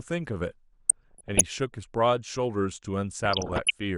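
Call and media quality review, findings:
MP2 compression, throughout: dull, band-limited speech with gurgling, granular texture; upper sub-bands flicker on and off as the bit allocation runs short. Likely cause: MPEG Layer II at a low rate, consistent with about 80 kbps.
Distinguishing note: the degradation is steady and level-stable, unlike the burbling below.

DAB burbling, 0.89–1.41 s: short noise blips in single sub-bands over speech. Residual bit errors corrupting MP2 samples and scale factors, so single sub-bands jump for a frame. Error density sounds low, a few tenths of a percent.

DAB burbling, 3.25–3.78 s: same sub-band blips, denser than the first burst, pointing to a higher error rate. Distinguished from the compression fault by isolated per-frame level jumps rather than constant dullness.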